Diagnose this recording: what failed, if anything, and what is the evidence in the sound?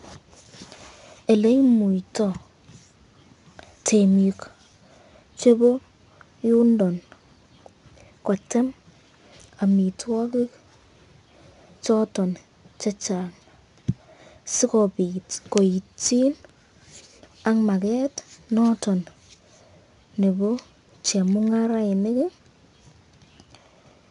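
The codec stage failed: 4-bit ADPCM compression runs throughout this speech. A gritty hiss rises and falls with loudness, unlike steady tape hiss, as each coarse 4-bit step misses the prediction. Attacks crunch. Nothing sounds above 10.6 kHz, which fits a rate near 89 kbps.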